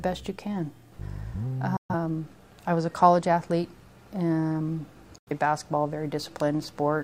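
Digital broadcast dropouts at 1.77 s and 5.18 s: the receiver mutes within about 3 ms for roughly 130 ms and 85 ms, then resumes later, with no concealing warble.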